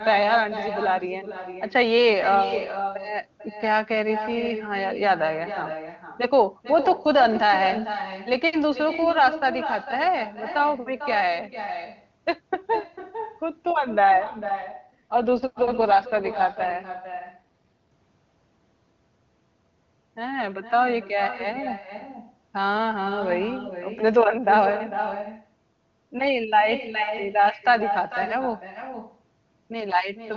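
With no echo canceller at the far end, a loudspeaker there feeds the call back into its microphone, and nothing removes it. Throughout the clip, every phrase returns about half a second later as a thin copy, about 11 dB below the speech.

From 14.12 to 17.91 s, an AMR rate drop lowers the codec's bitrate to protect against errors on a weak radio link. The sound suggests a step down from the 23.85 kbit/s mode to around 8.85 kbit/s. The speech turns rough and synthetic, with no gap and no loss of bandwidth, until the rate recovers.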